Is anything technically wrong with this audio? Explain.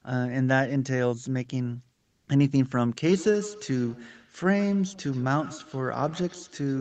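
Yes, two faults can be heard in this speech clip.

From 1.93 to 2.27 s, a 340 ms pause shows comfort noise in place of the background. The sender's voice detector judged the gap silent and stopped transmitting, likely through Opus discontinuous transmission, so the receiver generated smooth synthetic noise. It sits at the same level as the real background, about 49 dB below the loud speech, but sounds flat and featureless. On a spectrogram the textured background gives way to an even, uniform haze, with no level step in the waveform.

From 3.09 s to the end, the speech carries a feedback echo between two devices. A second device in the room plays the call audio, and the first device's microphone picks that sound up and sends it back into the call. Each device's echo canceller removes only what it plays itself, so this loop goes uncancelled. The speech returns around every 150 ms, peaking about 19 dB below the direct speech, and sounds thin and ringing. 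A spectrogram shows faint, evenly spaced copies trailing each syllable, and the waveform shows small repeated bursts after each one.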